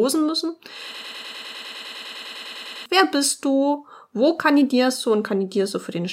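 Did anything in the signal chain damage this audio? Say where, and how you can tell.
Yes. The player or stream likely stalled and kept resending its last held fragment, a broken-record loop. From 0.95 to 2.86 s, a 0.1 s piece repeats exactly, back to back, 19 times, and the audio that belonged in that span is lost.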